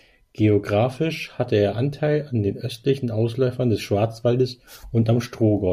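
Nothing in this speech recording stood out as a technical problem on listening.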